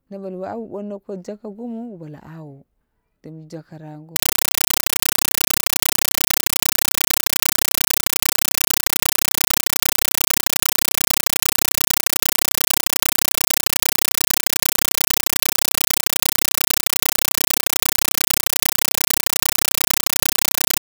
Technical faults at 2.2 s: none

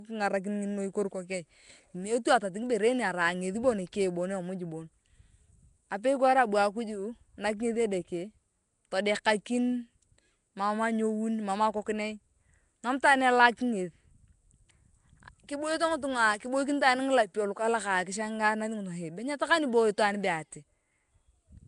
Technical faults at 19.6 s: Nellymoser compression

